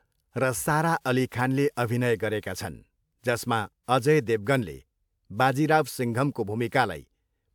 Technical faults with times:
none

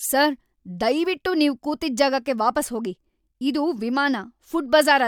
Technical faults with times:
none

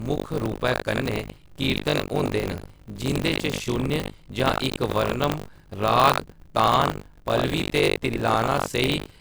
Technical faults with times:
0.00-9.21 generation loss
0.00-9.21 buffer tearing

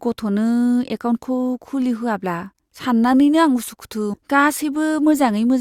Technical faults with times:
4.13-4.18 stream segment skipped

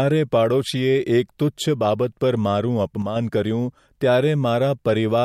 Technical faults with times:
3.02-3.16 sudden gain jump

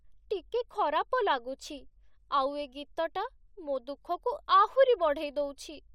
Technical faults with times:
2.70-2.73 compressed frames skipped

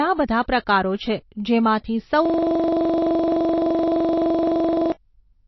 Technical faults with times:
0.00-5.47 MP3 compression

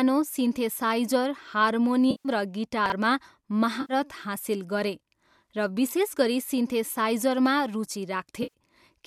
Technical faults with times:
2.10-2.29 AAC frame loss with concealment
2.86-2.92 chunks out of order
3.81-3.93 AAC frame loss with concealment
8.43-8.54 AAC frame loss with concealment

